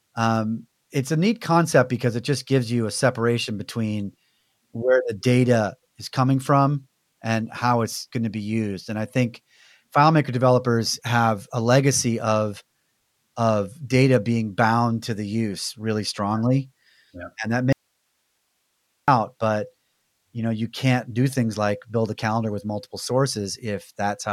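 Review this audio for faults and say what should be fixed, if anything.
An audio dropout to a faint residue runs from 17.73 to 19.08 s: the speech cuts out abruptly for about 1.35 s, leaving only hiss roughly 50 dB down. The likely cause is a lost signal path upstream while later stages stayed live. Waveform shows a sudden flat band; spectrogram, a blank speech gap over faint broadband noise. Securing connections and monitoring the input chain would prevent it.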